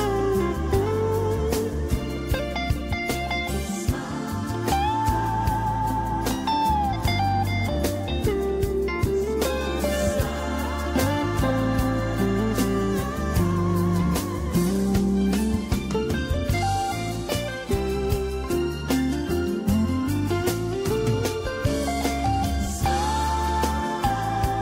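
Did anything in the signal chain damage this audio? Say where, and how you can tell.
No, nothing in the signal chain audibly damaged this audio. No stage, from the analogue wiring through to playback, leaves anything in the sound that points to a problem.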